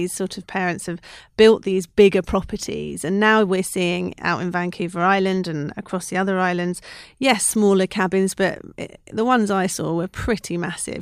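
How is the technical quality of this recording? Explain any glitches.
The recording's signal path shows no technical glitches of any kind, so there is nothing to explain.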